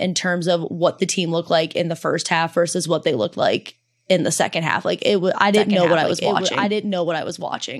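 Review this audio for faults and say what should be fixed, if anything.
From 5.54 s, just after "it was I", a doubled audio track appears and runs to the end: a second copy of the speech trails around a second behind and roughly 5 dB quieter. Unlike an echo or reverb, this copy is full-band, has no decay or room colour, and starts abruptly, so it is a duplicate, likely from a slower second capture path or misaligned edit. Prevent it by routing only one capture path into the mix and checking edits for overlapping copies.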